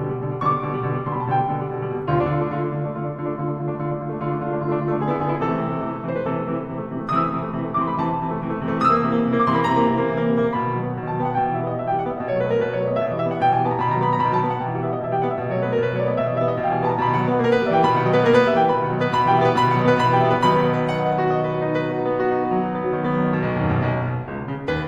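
Nothing goes wrong anywhere in this music clip; there's no technical fault to point to at any moment.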